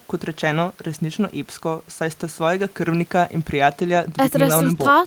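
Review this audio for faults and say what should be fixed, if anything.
Nothing stood out on listening to this speech recording, so there is nothing here that needs fixing.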